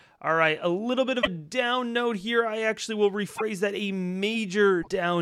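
At 1.21–1.28 s, after "a little bit of", at 3.35–3.41 s, after "here I actually will", and at 4.81–4.88 s, the speech jumps forward, likely a broken MP3 bit reservoir. These show as roughly 64 ms broadband smears or gaps on a spectrogram.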